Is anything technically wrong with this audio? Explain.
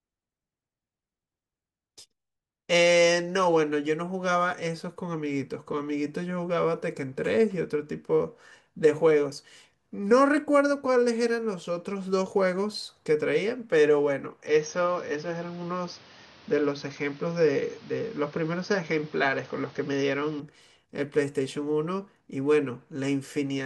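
Yes. From 14.47 to 20.40 s the speech narrows to nothing above 6.4 kHz, with a new, different noise floor roughly 30 dB down, no gap, and no obvious level jump. This is likely an input switched to a poorer device. The changed background noise distinguishes it from a simple low-pass filter.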